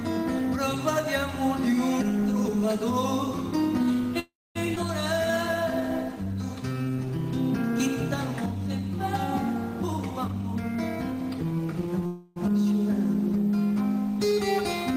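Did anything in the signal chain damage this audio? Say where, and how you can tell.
Yes. The damage sits in the network and jitter-buffer stage of a call path.

There are two call audio freezes, at 4.19 to 4.57 s and at 12.06 to 12.38 s. In each, the last sound is stretched into a fading buzz instead of moving on. The first lasts about 0.36 s and fades into roughly 0.24 s of silence. The second lasts about 0.30 s and never reaches silence. Afterwards the sound resumes exactly where it stopped, so nothing is lost. That sets these apart from a skip. The likely cause is packets stalling in transit while the buffer ran dry.

A skip ahead occurs at 4.75 to 4.78 s. Playback lurches forward with only about 10 ms of bridging, and roughly a fifth of a second of audio is simply gone, with the two sides butted together. Unlike the freezes, no time is added here. Material vanishes, which is what happens when audio is dropped in transit or discarded by an overflowing jitter buffer while later audio is already waiting.

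The jitter buffer slow-down shows up at 5.31 to 7.11 s, running at 94% speed with 123 ms added. It appears again more sharply at 8.58 to 8.81 s, at 85% with 41 ms added. Sounds are drawn out while pitch stays put, because repeated single pitch periods pad the stream to rebuild a reserve. A tape-style slow-down would drop the pitch along with the speed.

A jitter buffer speed-up runs from 9.97 to 12.02 s, at 109% speed, with about a fifth of a second trimmed away in many tiny cuts of one or a few pitch periods. The sound hurries but keeps its pitch. That distinguishes it from the single abrupt jump of the skip at 4.75 s: here the loss is spread thinly to shrink an oversized buffer delay.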